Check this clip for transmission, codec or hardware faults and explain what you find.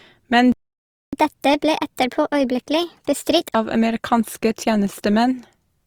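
Three faults are audible: codec damage across the whole speech recording, a gap near the start, and a stretch of sped-up playback after it.

Opus compression runs throughout. The tone of the voice is grainy and rough rather than swirly, and content still reaches about 20.3 kHz. That wide band points to the likely cause: Opus in its music (CELT) mode at a low rate, around 24 kbps. CELT keeps each band's energy but fills starved bands with folded or noise-like content, so harmonics turn gritty instead of dropping out. MP3 damage would leave holes and a watery swirl, and a speech-mode fallback would sound muffled and band-limited.

A playback stall runs from 0.52 to 1.13 s. The sound cuts off mid-flow into silence for about 0.61 s, then resumes. The likely cause is the player running dry of data or having its output thread blocked until it recovered. A network dropout with concealment would fill the gap with smeared or repeated sound. 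Here the output simply goes silent and picks up again cleanly.

Catch-up at higher speed follows, from 1.13 to 3.55 s, starting just before "av amerikanske". The player resamples its backlog at 1.25 times normal speed to regain the time lost in the stall. Because it resamples, pitch rises with tempo, by about four semitones, giving a brisk, chipmunk-like lift before the voice drops back to normal. A time-stretching catch-up would speed things up without the pitch jump.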